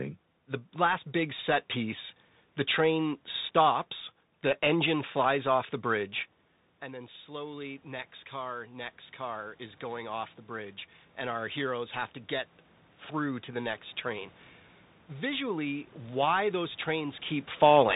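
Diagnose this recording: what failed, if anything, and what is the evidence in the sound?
The codec stage failed throughout: the audio has passed through a Bluetooth CVSD headset codec, which fits a 64 kbit/s stream of one bit per sample. The coder only signals up or down, with an adaptive step, so fast loud high-frequency detail outruns it. The sibilants come out scratchy and a granular hiss sits under the speech. On a spectrogram, energy stops at a hard ceiling near 3.8 kHz, and the noise floor looks grainy beneath every phrase.

Call processing shows automatic gain rising. Around 6.0 s the talker moves away and the input drops by about 15 dB. From 6.80 s, just after "flies off the bridge", the AGC responds by slowly lifting its gain by about 9 dB until 12.02 s, just before "to get". Speech and room noise swell together because the gain acts on everything. On a waveform, the envelope climbs as a gradual ramp over roughly five seconds rather than a step.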